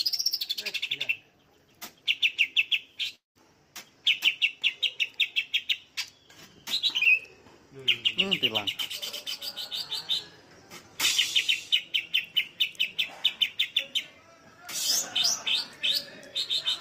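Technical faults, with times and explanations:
3.15–3.37 s, long network dropout: incoming audio likely stopped arriving, so the receiver stretched the last sound into a fading buzz over about 196 ms, 150 ms of it silence; when sound resumes, the missing 200 ms is simply gone.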